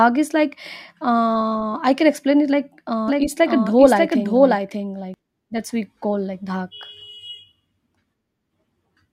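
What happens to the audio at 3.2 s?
At 3.2 s a doubled audio track is under way, running from 3.08 to 5.14 s: a second copy of the speech, about as loud as the first, trails it by roughly 0.7 s, likely from a slower capture path. Unlike an echo, it has no decay or room colour and starts and stops abruptly.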